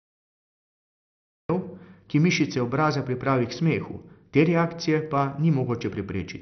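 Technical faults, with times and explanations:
Throughout, MP2 compression: dull speech with nothing above 6.2 kHz and a gurgling, granular texture, likely Layer II coding starved of bits, consistent with about 48 kbps.
0.00–1.49 s, cut-off start: digital silence, then speech enters mid-sound at 1.49 s with no natural attack; the recording began late, unlike a mid-clip dropout.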